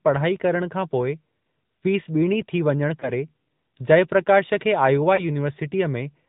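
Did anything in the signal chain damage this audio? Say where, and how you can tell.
Yes. The codec stage is the first: the whole clip has passed through the AMR narrowband mobile codec. The speech has a plainly audible buzzy, synthetic edge, which fits a mid-rate AMR-NB mode around 10 kbps. A spectrogram shows a hard ceiling at 4 kHz with nothing above it, from 8 kHz sampling. The codec rebuilds the voice from a vocal-tract model excited by sparse pulses.

The network stage is the second: there are lost AMR speech frames at 3.0–3.1 s and 5.16–5.25 s. Each is a brief dip or warble, which fits one 20 ms frame failing its radio checksum. The decoder then repeated the last good pitch and filter settings at reduced gain. On the waveform the envelope sags briefly, and on the spectrogram the harmonics freeze and fade before recovering slightly rough.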